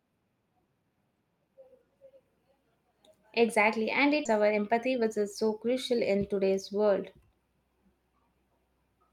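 Right after "and it", at about 4.25 s, there's a skip ahead. Roughly half a second of speech just isn't there. Playback jumps straight to later audio with no silence or filler in between, so the two sides butt up against each other. That's what you get when a chunk gets dropped, in transit or when an overfull jitter buffer discards it, while newer audio is already queued.

Almost straight after, from 4.34 s to 6.59 s, the jitter buffer speed-up kicks in. The receiver was holding more audio than it wanted, so it trimmed tiny slices, each a pitch period or so, over and over to pull the delay back down. Together they add up to about a fifth of a second. The speech runs at 110% speed while the pitch stays put, so that stretch comes across as a bit rushed.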